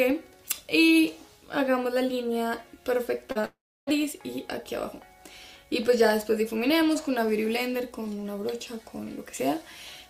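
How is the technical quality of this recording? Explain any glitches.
The recording has a cluster of network glitches just after the three-second mark.

Short concealed packet loss occurs twice, at 3.31 to 3.37 s and at 3.41 to 3.45 s. Around 40 ms and then 20 ms of audio arrived too late to decode. The receiver covered each gap by extending the preceding sound and then blending back. Each one is heard as a quick smear or wobble rather than a clean cut.

A long network dropout follows at 3.45 s and lasts until 3.89 s. For about 0.42 s no audio got through, likely because the connection stalled. The receiver first stretches the last sound into a fading buzz or hiss. Then about 0.31 s of silence remains. When the sound resumes at 3.89 s, it jumps ahead, and the missing stretch never plays.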